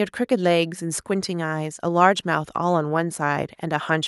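No audible technical faults.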